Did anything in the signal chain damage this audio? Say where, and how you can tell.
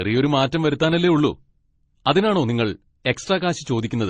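Yes. Transcoding between lossy codecs, at the codec stage, runs throughout the speech: two kinds of compression artefact sound at once, with nothing above 19.6 kHz. It is likely a low-bitrate MP3 encode re-encoded by Opus, which spent its bits on the MP3 artefacts and added its own.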